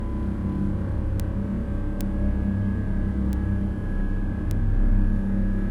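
Four bit error spikes occur at 1.20, 2.01, 3.33 and 4.51 s. Each is a single sharp, broadband tick, peaking at about -8 dBFS for the first three and about -14 dBFS for the last. A flipped bit makes the sample value jump by a power of two and snap straight back. The ticks are brief enough to fit a single sample or a few. Unlike a dropout or edit click, nothing in the surrounding sound is lost or shifted, and the ticks bear no relation to what is playing.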